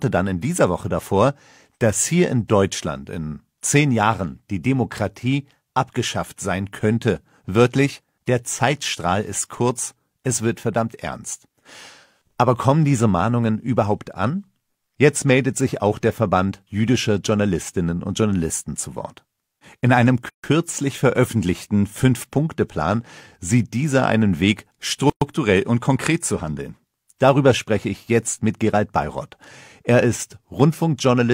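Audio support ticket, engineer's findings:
Gap at a join of encoded pieces, 20.29–20.44 s (about 146 ms) and 25.10–25.22 s (about 118 ms). Silence drops into continuous sound, edges smeared, sound resumes where it stopped. Separately encoded segments concatenated untrimmed: encoder start delay plus final-frame padding left in at each join.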